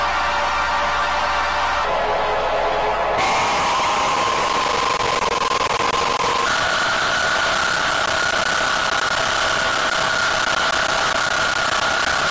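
From 1.85 s to 6.46 s the audio suffers a wrong sample rate fault: the samples are clocked out more slowly than they were captured, with no conversion in between. Everything runs at about 0.73 times normal speed and drops about 5.5 semitones, which fits material recorded at 22 kHz being played at 16 kHz. Unlike a pitch shift or time-stretch, tempo and pitch move together, so the sound turns low and sluggish.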